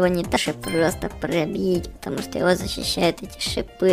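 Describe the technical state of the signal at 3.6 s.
At 3.6 s the signal is intact, with no audible dropout, distortion, glitch or other technical fault at that point.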